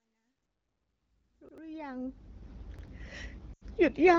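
A short stutter at 1.49 s and again at 2.79 s, where a roughly 93 ms piece plays twice with a hard join. That's a repeated buffer: fresh audio arrived late, so the last block, which fits a 4096-sample buffer, played again and about a tenth of a second was lost. At 3.53 to 3.63 s the speech drops to near silence for 80 ms, then returns weak or rough for a moment. That's lost AMR speech frames: radio errors corrupted several frames, so the wideband decoder reused its last good settings at falling gain.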